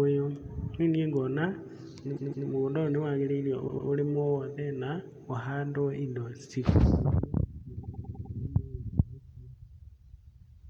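Repeated frames: runs of compressed frames were sent more than once, so the decoder replays the same slice of speech. A 157 ms block plays twice more from 2.16 s, a 105 ms block twice more from 3.67 s, and five more times from 7.83 s, each heard as a stutter.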